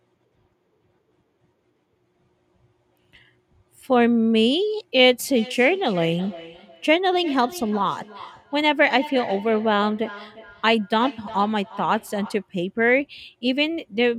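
From 5.36 s to 12.51 s there's feedback echo between two devices: a second device plays the speech back into the mic, so it returns roughly every 0.4 s, about 17 dB down. At 12.08 s a repeated buffer gives a quick click, as one tiny slice plays three times, which fits a 128-sample buffer.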